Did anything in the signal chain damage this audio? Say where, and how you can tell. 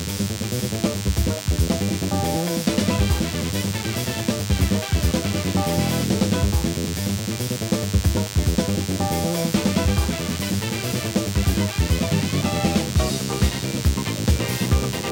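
Yes. A steady, thin buzz sits under the sound for the whole clip, pitched at 100 Hz and rich in harmonics, so it reads as a gritty rasp, not a smooth hum. It is loud, only about 10 dB below the wanted signal. This is DECT cordless phone buzz, entering in the analogue wiring: a nearby handset or base emits a radio burst every 10 ms, the audio circuitry rectifies each burst, and the resulting pulses arrive at a steady 100 Hz.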